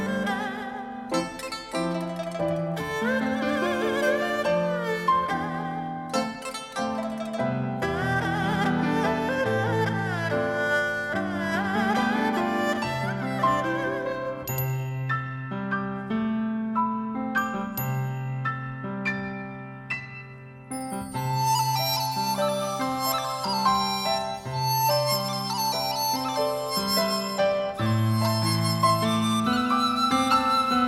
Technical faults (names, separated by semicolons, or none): none